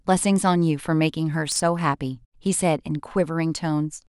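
Chunks out of order at 1.52 to 1.60 s: over this 80 ms stretch, two consecutive 40 ms chunks of the speech play in swapped order, because one chunk arrived or was written one slot late and landed after the chunk that should follow it. No audio is lost, but the sequence breaks at three hard joins, and the brief reversal makes that moment sound garbled and jumbled.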